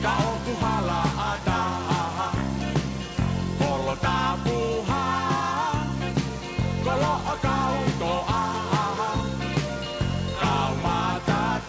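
Nothing here goes wrong, and the only thing worth pointing out is that the sound tops out around 8 kHz, which fits a wideband call codec such as G.722 carrying it through an ordinary call path.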